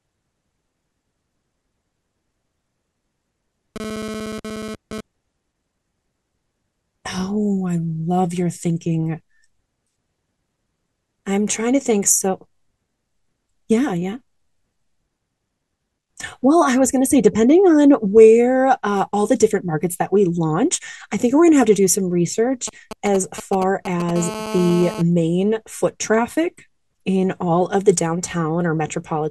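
From 3.76 to 5.01 s a GSM phone buzz cuts in at about 11 dB below the speech. A nearby 2G handset in data transfer pulses its radio 217 times a second, and the audio circuitry rectifies those pulses into a harsh, raspy buzz that comes and goes. On a spectrogram it shows as a ladder of evenly spaced horizontal lines at 217 Hz and its harmonics, switching on and off. The waveform shows a fine, regular comb of spikes.

Between 22.68 and 24.11 s GSM signalling bursts give a galloping dit-dit-dit of short 217 Hz buzzes, roughly 10 dB under the speech. The handset is sending only brief groups of bursts, so the spectrogram shows short, separated clusters of vertical striping rather than continuous lines.

At 24.16 s the phone goes into a call and a steady GSM phone buzz runs until 25.02 s, about 11 dB below the speech. The unbroken burst train leaves continuous harmonic lines across the spectrogram for that stretch.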